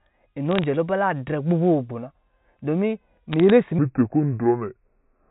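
A speech clip carried over a G.711 telephone path, band-limited below 4 kHz, with two faults. Bit errors on a digital phone line cause short bursts of sharp ticks from 0.51 to 0.64 s and from 3.32 to 3.5 s, with error rates of very roughly 0.1 and 0.15 percent. Each flipped bit corrupts a single sample, so these are isolated clicks over intact speech rather than the smeared gaps of lost packets. From 3.79 s to the end, the section at the wrong speed plays at 0.7 times the recorded rate, most likely because it was fitted to the wrong clock. Pitch drops roughly seven semitones and the pace slows together. That joint change is what separates it from a pitch shift or time-stretch, which would alter only one of them.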